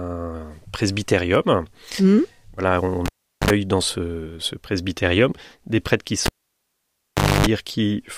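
At 3.06 s the cable gets pulled and plugged in: a pop, about 0.4 s of near silence, a short 50 Hz buzz as the tip touches, and a pop back at 3.50 s. It happens again at 6.26 s with a longer gap and buzz, returning at 7.46 s.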